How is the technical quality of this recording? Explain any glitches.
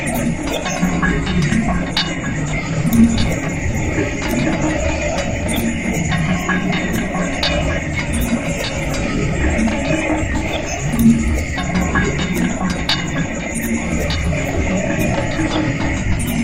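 The recording has no technical glitches. The sounds in it run without any dropouts, clicks or other disturbances.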